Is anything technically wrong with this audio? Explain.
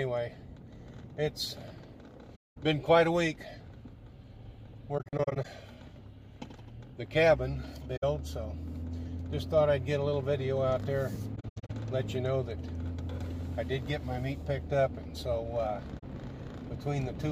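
Yes. There is AAC frame loss with muting at 2.35–2.58 s, 4.98–5.46 s (broken into several short gaps), 7.96–8.04 s, 11.35–11.70 s (scattered, the longest gap around a tenth of a second) and 15.99–16.04 s. Lost frames are decoded as silence. The overlapping transform windows fade the sound down and back up, so each hole has soft edges. That separates it from a hard sample dropout, which clicks.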